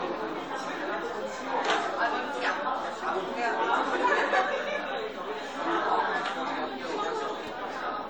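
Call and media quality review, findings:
Chunks out of order at 7.47 s: brief jumbled flick in the sound. One 5.33 ms chunk played one slot late, giving three hard joins. Probable component: playback buffer queue. Unlike a dropout, nothing is missing and no silence appears.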